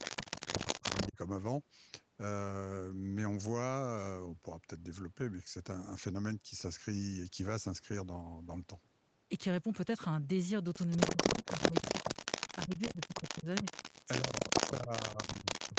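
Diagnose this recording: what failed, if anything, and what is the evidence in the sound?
Echo leak, at the call processing stage. A delayed copy of the speech trails it by 271 ms, from 0.0 to 1.08 s and from 11.0 s to the end. It starts about 5 dB quieter than the speech, then matches it. The likely cause is a far-end echo canceller passing its loudspeaker pickup back.

Speech suppressed in double talk, also in call processing. The speech drops by up to roughly 15 dB at 0.23 to 1.18 s, 11.15 to 11.89 s, 12.54 to 13.65 s, and 14.21 s to the end. Each dip overlaps the echo. The canceller likely could not separate talker from echo, so it attenuated both.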